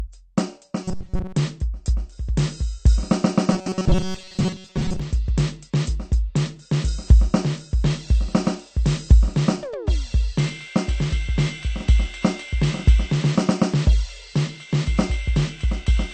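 Across the whole music clip the top end is dulled, and sustained tones carry a warbling, fizzy smear. That points to AAC compression, likely AAC-LC at around 32 kbps, where the encoder runs out of bits and drops or fakes whole bands. Unlike a plain low-pass filter, the loss shifts from moment to moment, leaving gurgling holes rather than a clean, steady dullness.

From 0.84 to 1.36 s, and again from 3.53 to 5.00 s, the music collapses into a rigid metallic buzz pitched at 188 Hz. This is robotic sound from repeated short buffers: new audio arrives too rarely, so a roughly 5.3 ms slice is looped over and over, likely covering about seven-tenths of each stretch. The buzz holds a fixed pitch, which tells it apart from flanging, where the tone sweeps.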